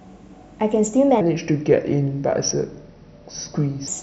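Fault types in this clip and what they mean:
Section at the wrong speed: from 1.21 to 3.88 s the speech drops to 0.79 times speed, so it drags and sits about four semitones lower, likely a playback clock mismatch.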